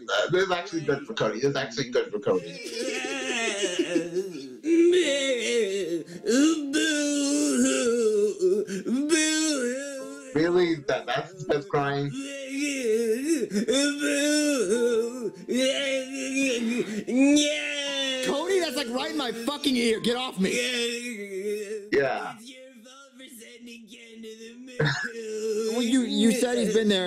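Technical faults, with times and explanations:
No technical faults detected anywhere in the clip.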